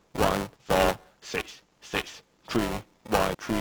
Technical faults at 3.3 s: buffer tearing; damaged data in a compressed stream

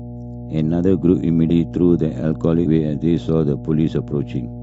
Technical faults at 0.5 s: mains hum

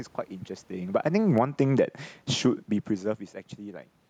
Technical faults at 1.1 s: automatic gain falling

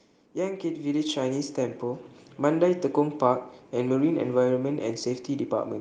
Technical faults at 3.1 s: none

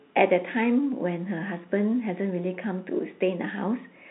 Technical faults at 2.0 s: none

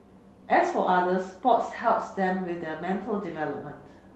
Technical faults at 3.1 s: none

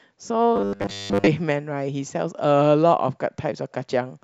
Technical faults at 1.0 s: robotic sound from repeated short buffers

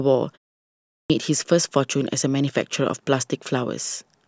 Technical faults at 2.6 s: none

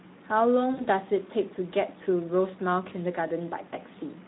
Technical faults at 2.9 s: Speex codec; VoIP packet loss concealed by the speech codec

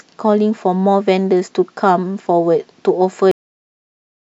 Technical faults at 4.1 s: cut-off end

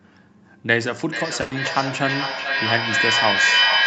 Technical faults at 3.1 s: feedback echo between two devices

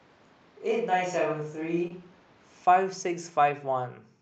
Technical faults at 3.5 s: none

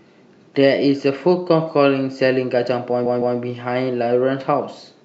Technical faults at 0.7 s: none

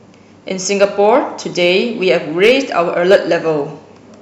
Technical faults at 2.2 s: hard clipping

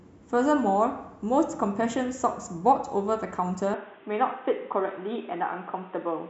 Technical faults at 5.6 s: input switched to a poorer device

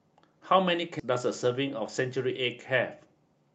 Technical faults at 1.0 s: skip ahead

